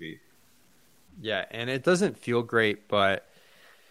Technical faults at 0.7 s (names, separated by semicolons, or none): low bit depth without dither